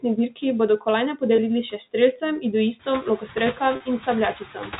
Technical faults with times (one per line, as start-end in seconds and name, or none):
0.00-4.80 noise suppressor artifacts
0.02-0.43 speech cut by the noise suppressor
1.36-1.38 packet loss with pitch repetition
2.86-3.24 speech cut by the noise suppressor
3.76-3.80 packet loss with pitch repetition
4.40-4.72 speech cut by the noise suppressor